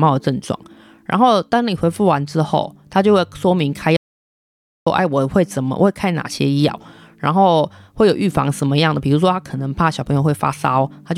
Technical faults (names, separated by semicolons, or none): audio dropout to silence